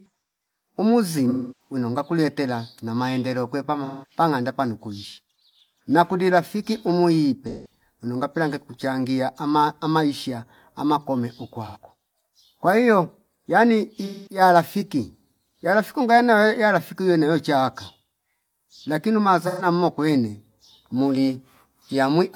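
Speech with AAC frame loss with concealment at 1.29, 3.85, 7.49, 11.66, 14.05 and 19.46 s, each lasting roughly 0.1 to 0.3 s, the second right after "ngakulie tela na maendeleo". The decoder repeats the last good spectrum, so these patches sound smeared and phasey rather than cutting to the hard silence of a plain dropout.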